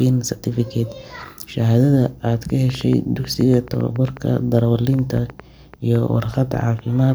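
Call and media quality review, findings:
Train of clicks, 2.50–6.80 s. Likely cause: interference from nearby equipment or a faulty connection or power supply injecting repeated pulses into the path. Result: similar-shaped clicks at about 5.8 per second, unevenly spaced, roughly thirty in total, peaking about 5 dB above the speech, heard as ticking over the talk and in its pauses.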